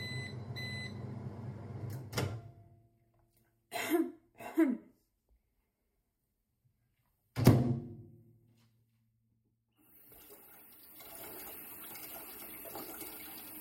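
No faults heard anywhere in these everyday sounds; nothing to flag.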